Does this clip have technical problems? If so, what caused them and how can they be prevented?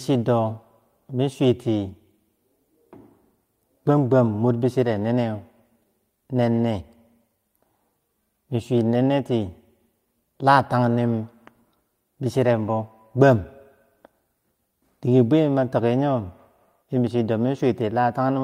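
No, nothing in this recording stood out as a technical problem on listening, so there is no cause to trace and nothing to prevent.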